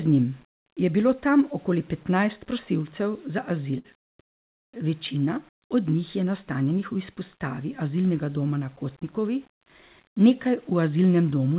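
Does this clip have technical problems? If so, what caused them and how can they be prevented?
Yes. Throughout the speech there is grainy distortion that tracks the signal, with the quietest passages turning gritty or sputtering. This is low bit depth without dither, likely 8-bit rounding, leaving error only about 35 dB below the signal. Keeping a higher word length, or adding dither before any reduction, prevents it.

From 3.78 to 3.86 s a burst of packet loss occurs: the receiver held and faded the last sound for about 60 ms, then resumed after roughly 60 ms of audio was skipped. A larger jitter buffer and a more stable network connection prevent this.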